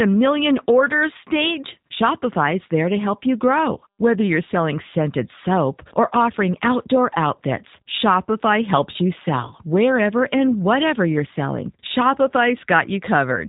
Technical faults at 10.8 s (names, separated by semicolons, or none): G.729 codec